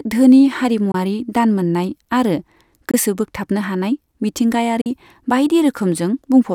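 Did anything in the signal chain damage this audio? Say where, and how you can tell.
Yes. The speech drops to sudden silence at 0.92–0.95 s (before "दान मोननाय"), 2.91–2.94 s (before "बोगथाबनो हानाय") and 4.81–4.86 s, then picks up as if it had kept playing. This is likely a Bluetooth dropout on the wireless playback link: about 21, 21 and 43 ms of audio never arrived in time and were discarded, which fits one or two lost packets each time.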